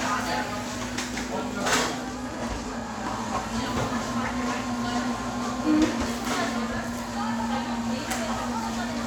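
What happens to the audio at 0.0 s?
At 0.0 s the sound starts cleanly, with no click, dropout or other fault.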